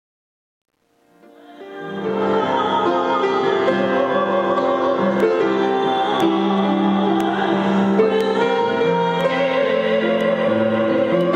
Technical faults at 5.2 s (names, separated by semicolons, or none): none